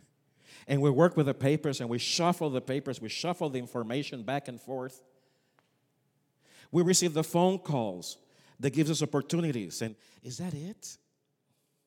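At 9.88 s, right after "that gives us opportunities", the speech suddenly drops by about 6 dB and stays lower through to the end at 11.87 s. The change is a clean step, not a fade. The likely cause is one channel dropping out of a stereo recording. When the two sides are summed to mono, material shared by both channels loses half its level, and anything carried only by the missing side disappears.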